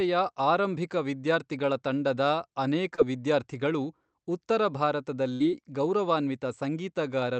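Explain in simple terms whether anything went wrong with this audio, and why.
Short concealed packet loss at 2.95 to 3.00 s, between "ಆರಂಭಿಕ ವಿದ್ಯಾರ್ಥಿಗಳ ತಂಡದ ಅನೇಕ" and "ವಿದ್ಯಾರ್ಥಿಗಳು ಉತ್ತರ": about 20 ms of the call arrived too late, and the receiver stretched the previous sound over the gap, leaving a tiny smear.

A burst of packet loss at 5.34 to 5.42 s: several packets in a row went missing, so the receiver kept the last sound going and faded it out. About 60 ms of real speech is simply gone.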